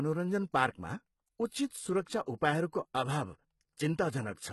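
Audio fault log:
Throughout: HE-AAC compression, likely, heavy, at what sounds like a low bitrate near 16 kbps; nothing above 11.8 kHz, synthetic treble makes sibilants gritty and lispy.
2.24 to 2.28 s: pre-echo, a 40 ms smear of hiss ahead of an attack, block-wide quantisation noise spilling before the transient and softening it.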